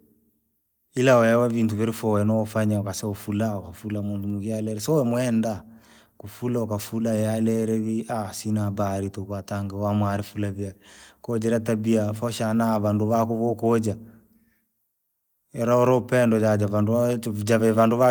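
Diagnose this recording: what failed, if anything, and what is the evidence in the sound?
Nothing in this speech recording points to a failure at any stage of the signal chain. There is no audible evidence of a fault to diagnose.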